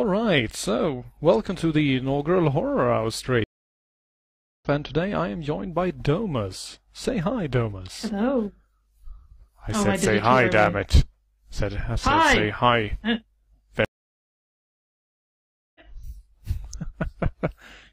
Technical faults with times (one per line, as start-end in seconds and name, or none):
3.44-4.66 stream reconnect
13.85-15.81 stream reconnect